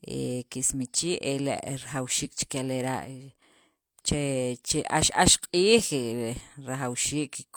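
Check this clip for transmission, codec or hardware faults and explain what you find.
One fault is present: a sudden gain jump from 3.05 to 3.42 s, where the speech and background noise both fall by about 6 dB at once and recover just as abruptly. The likely cause is a gain setting applied without a ramp. Unlike automatic gain control, there is no gradual slope, and the audio never goes silent as it would in a dropout.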